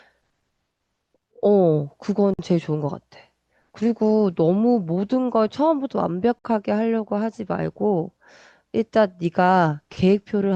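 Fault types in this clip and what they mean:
Gap at a join of encoded pieces: The speech was encoded in separate pieces and joined untrimmed, so encoder delay and last-frame padding stay in. Silences of about 52 ms and 53 ms open at 2.34 s and 6.39 s, four seconds apart, with smeared edges.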